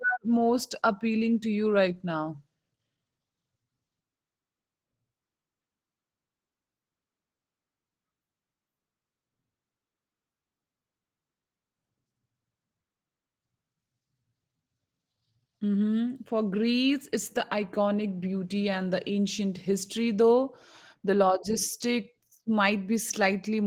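Throughout the speech there is a plainly audible hoarse, slightly robotic grain. This is Opus voice compression in hybrid mode. Linear prediction codes the band below 8 kHz coarsely, and a sparse transform layer covers the rest. The sound fits a low rate near 16 kbps.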